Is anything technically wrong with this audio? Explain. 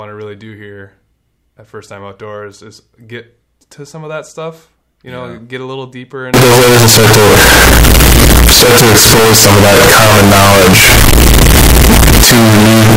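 Yes. From 6.34 s to the end, signed and unsigned samples are mixed up, likely in reading 16-bit data. Flipped top bits turn zero crossings into full-range jumps. The speech becomes loud, harsh distortion, with quiet parts as loud as the rest.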